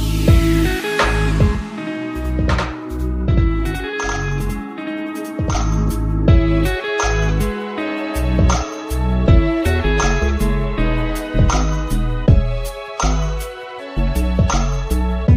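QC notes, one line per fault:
1.55–5.55 s: channel delay (doubling). One channel runs about 93 ms late, which fits a 4096-sample buffer, so the mono sum gives a single equal-level slap with no decaying tail, unlike reverb or echo.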